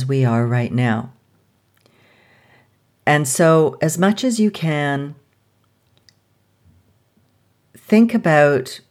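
No technical faults can be heard anywhere in this recording.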